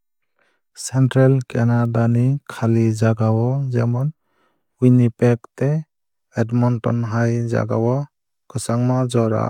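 At 1.85 s a bit error spike gives one sharp, broadband tick near -22 dBFS: a single flipped sample, unlike a dropout click, with no gap or level step.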